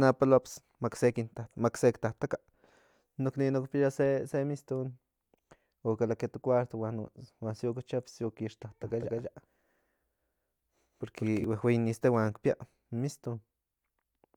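From 8.82 s to 11.44 s the speech becomes a doubled audio track: a second, equally loud copy trails about a fifth of a second behind, likely from the signal being captured twice. Unlike an echo, it has no decay or room colour and switches abruptly on and off.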